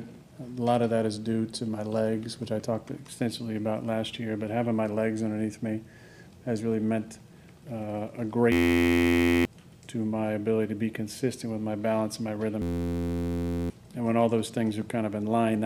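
A steady, rasping buzz at about 86 Hz replaces the sound from 8.52 to 9.45 s, and again from 12.62 to 13.7 s. Both are a system hang loop. The machine stalled while the playback hardware kept replaying the same 11.61 ms slice of its ring buffer, which fits a 512-sample buffer. Each hang swallows roughly a second of audio before playback resumes.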